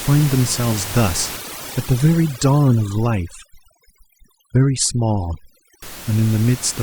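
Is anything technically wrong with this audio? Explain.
Yes. Overdone noise removal runs from 1.37 s to 5.82 s. The noise reduction was pushed too hard against the room noise, which sits about 14 dB below the speech: any frequency band close to the estimated noise level is pulled far down or shut off entirely, and the quieter parts of the speech are removed along with it. Through that stretch, the gaps between speech fall to near silence scattered with twinkling specks.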